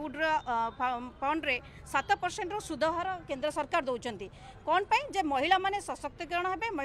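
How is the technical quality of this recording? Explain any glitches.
No glitches can be heard anywhere in the recording, and the signal stays technically intact throughout.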